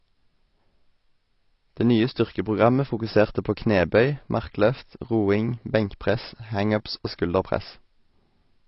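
Speech runs throughout with signs of AAC compression, likely from AAC-LC encoding at a low bitrate, which the sound suggests is around 24 kbps. At that rate the encoder quantises each frame's frequency lines coarsely against its hearing model and drops the top of the spectrum. Nothing sounds above 5.7 kHz, so the voice loses its upper range, and the coding damage is plainly audible across the whole recording.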